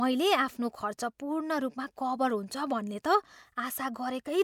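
No technical faults can be heard anywhere in this speech recording. There is nothing in the audio to mark at any point in time.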